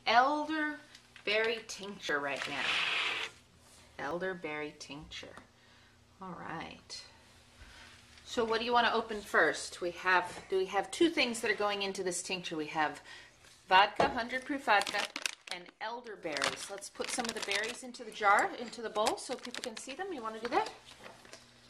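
At 0.63, 2.09, 4.11, 14.94, 17.32 and 19.64 s, the sound jumps forward, without any gap of silence. Each is likely a dropped buffer (overrun), where roughly 10 to 30 milliseconds of audio were overwritten before capture and the remaining edges were butted together.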